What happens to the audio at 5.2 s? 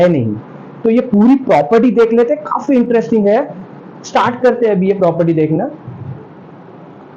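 Nothing goes wrong at 5.2 s; the audio plays through that moment intact, with no dropout, click or distortion.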